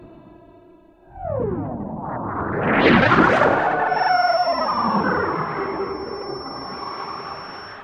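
From 3.84 s to the end, there's a feedback whistle: a thin, steady tone at 5.4 kHz sitting roughly 20 dB under the sound, swelling and fading slowly. Most likely the speaker-to-mic loop was hovering right at the feedback point without tipping over.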